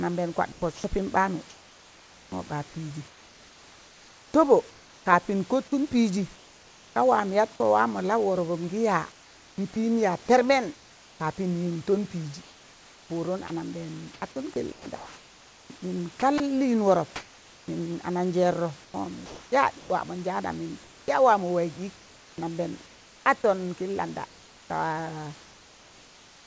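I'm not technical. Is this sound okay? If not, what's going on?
No. From 0.52 to 7.60 s and again from 9.12 to 23.26 s, the speech keeps cutting in and out, with quiet bits swapped for a flat hiss. This is sound chopped by the voice detector, likely the sender wrongly deciding nobody was talking. From 25.44 s to the end, the real room background gives way to a smooth, slightly quieter hiss. That's comfort noise in place of the background: the sender likely stopped sending during the pause, and the receiver filled the gap with synthetic noise.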